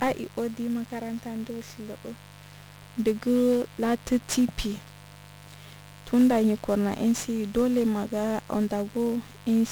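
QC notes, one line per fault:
throughout, mains buzz: switching spikes from a dimmer, rectifier or unshielded line are getting into the path twice per 50 Hz cycle, so harmonics stack up into the kilohertz range. The result is a steady, raspy buzz sitting roughly 15 dB below the speech.
throughout, 1-bit DFPWM compression: the speech has been coded at a single bit per sample, which fits a 48 kbps DFPWM stream, each bit only nudging an adaptive level up or down. The coarse steps leave heavy broadband noise, making everything fuzzy and crackly, with treble buried in hiss.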